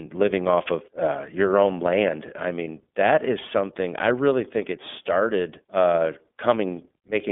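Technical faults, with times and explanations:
Throughout, iLBC codec: the speech has passed through the narrowband iLBC VoIP codec at a rate that fits 13.33 kbps, with 30 ms frames. The line passes roughly 200 Hz to 3.5 kHz, so the voice sounds boxed-in and telephone-like. The codec damage is plainly audible as a rough, slightly synthetic edge. A spectrogram shows a hard ceiling near 3.5 kHz, empty above, with thin energy below 200 Hz.
2.64 to 2.67 s, lost iLBC frames: one 30 ms frame goes missing between "your own land I" and "that is something I". The decoder fills the hole by repeating the last pitch cycle blended with noise, so it comes out as a brief held, faintly buzzy vowel rather than silence. Because iLBC frames stand alone, clean decoding resumes immediately afterwards. On a waveform this looks like a short stretch of near-identical repeated cycles, and a spectrogram shows flat, unchanging harmonic bands across that slice.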